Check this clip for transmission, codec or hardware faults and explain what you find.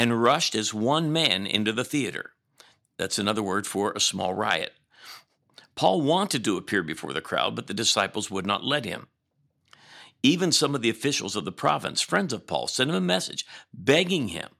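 No transmission, codec or hardware fault can be heard anywhere in the speech; the signal stays continuous and stable throughout.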